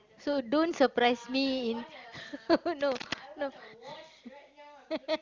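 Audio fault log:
2.81 to 3.22 s, cable scratch noise. Dense, uneven scratching and rustling sits over the speech for about 0.4 s, only a little quieter than the speech itself. A worn cable or connector was likely being moved, making its contact resistance jump rapidly.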